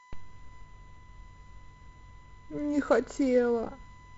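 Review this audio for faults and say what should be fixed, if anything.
A USB whine runs through the whole speech clip: a steady, fixed-pitch tone at 1 kHz, sitting roughly 30 dB below the speech. It comes from the USB bus drawing current in 1 ms frames, and that 1 kHz pulsing leaks into the audio through shared power or ground. On a spectrogram it shows as a thin, unbroken horizontal line at 1 kHz across the full length. This is separate from the normal wideband-telephone band limit, with nothing above about 7.8 kHz. Power the interface from a clean supply, or add a ground-loop isolator or USB isolator, to keep bus current out of the audio path.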